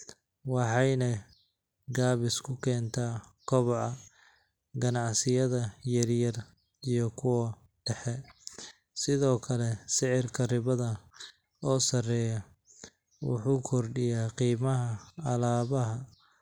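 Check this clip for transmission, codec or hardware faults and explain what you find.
Two brief clicks in the speech, at 5.54 s and 14.03 s. Dropped samples are the likely cause: a fraction of a millisecond goes missing, so the waveform jumps. Each is a sharp click with no audible gap, unlike a dropout.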